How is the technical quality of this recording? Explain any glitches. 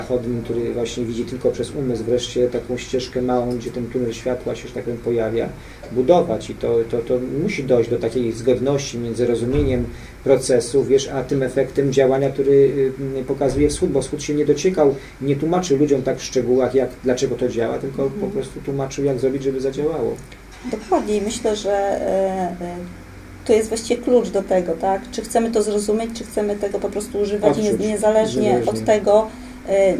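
No glitches or technical faults can be heard anywhere in the recording, so there is nothing here that needs explaining.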